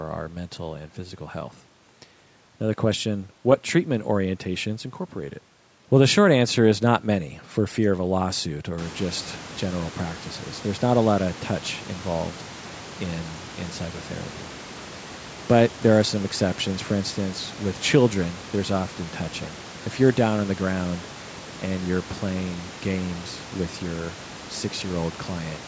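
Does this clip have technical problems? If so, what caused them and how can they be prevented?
No, nothing here points to a technical fault.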